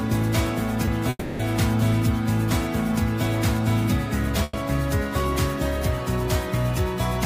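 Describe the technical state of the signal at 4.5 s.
A call audio freeze runs from 4.43 to 4.55 s. For about 100 ms the receiver carries the last sound forward as a fading buzz or hiss, with no drop to silence, and then the audio resumes exactly where it halted. Nothing is lost; instead a gap is inserted, so everything after it plays about 100 ms later. That pattern most likely comes from packets delayed in transit, leaving the jitter buffer empty until they arrived.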